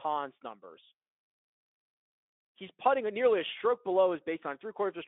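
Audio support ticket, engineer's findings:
No findings: no fault detected on this speech clip.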